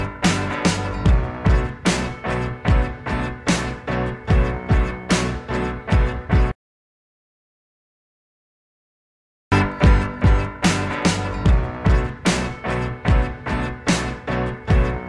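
Nothing stood out as a technical fault on listening.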